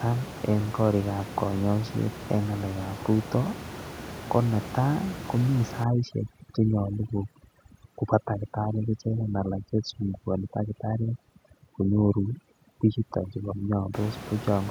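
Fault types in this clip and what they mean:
overdone noise removal: from 5.84 to 13.94 s the background drops and breaks up into twinkling specks; heavy noise reduction is muting frequency bands near its noise estimate.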